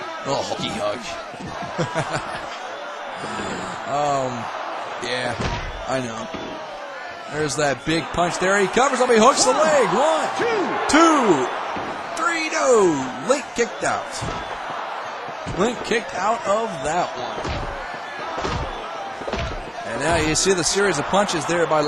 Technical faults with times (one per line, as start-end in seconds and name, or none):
0.53-0.56 compressed frames skipped
15.37 compressed frames skipped
19.77 compressed frames skipped